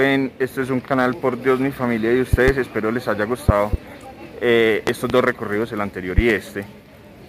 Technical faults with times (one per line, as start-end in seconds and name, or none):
0.00-7.29 sample clock jitter
2.33-2.51 loud pop
3.49-3.76 loud pop
4.87-5.13 loud pop
6.18-6.33 loud pop